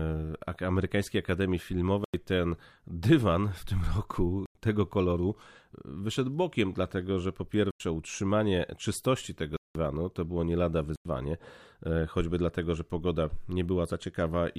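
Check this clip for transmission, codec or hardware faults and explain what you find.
The speech drops out five times in blocks of digital silence: the output buffer went unfilled, so whole blocks were zeroed. Gaps of about 93 ms fit a 4096-sample buffer, at 2.04 s (before "ten dywan w tym"), 4.46 s, 7.71 s (between "bokiem dlatego że po" and "utrzymanie czystości tego") and 10.96 s (after "to było nie lada"), and one of 186 ms, two blocks, at 9.57 s. Each is a hard hole.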